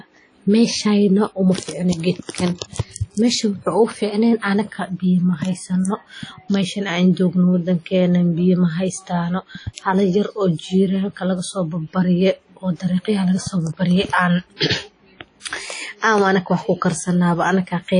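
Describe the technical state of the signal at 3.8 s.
At 3.8 s, as across the whole clip, the speech carries plainly audible codec damage, likely WMA compression at a rate that fits about 32 kbps. Long transform blocks smear quantisation noise into a ringing, washy hiss, and a spectrogram shows a hard ceiling near 10.1 kHz with patchy, zeroed weak bands.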